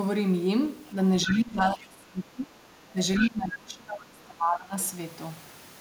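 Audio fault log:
0.86 to 0.93 s, 1.29 to 1.40 s, 2.89 to 2.93 s and 3.18 to 3.30 s, other side's voice leaking through: brief scraps of a second voice. The first and third are faint, some 35 dB under the talker. The second is about 10 dB under and the last only about 5 dB under. This is likely residual loudspeaker echo the canceller missed. The spectrogram shows harmonic traces over the main speech.
1.26 to 2.57 s, 2.92 to 2.96 s and 3.18 to 4.75 s, speech suppressed in double talk: the talker's level sags while the other side is active. The deepest dips are around 20 dB in the long stretches and about 10 dB in the short one, likely the canceller attenuating both voices at once. The waveform envelope shows sudden notches.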